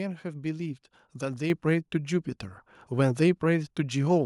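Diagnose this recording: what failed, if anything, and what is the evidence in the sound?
Microphone volume stepped up at 1.5 s: the speech and the background noise floor jump together by about 7 dB in a single step. This points to call processing, where automatic gain control judged the input too quiet and raised the device's capture volume at once.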